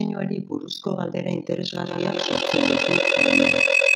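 From the very start, the speech carries an overlap-add ripple: it was chopped into windowed frames and stitched back together with overlaps that don't add up to a steady gain, so the level dips and swells once per frame. The ripple is about 60 dB deep and runs at roughly 40 Hz, which makes it sound like a fast, gritty flutter, almost a robotic tremolo riding on top of everything.

Then at 1.85 s a feedback howl kicks in and keeps going until the end at 3.96 s. What's happening is that a microphone is picking up a loudspeaker carrying the same call, and each trip round that loop comes back louder rather than quieter. The repeats narrow down to around 3 kHz, come round roughly every 150 ms, and peak at about 6 dB above the speech, so it ends up as a shrill whistle sitting on top of the talking.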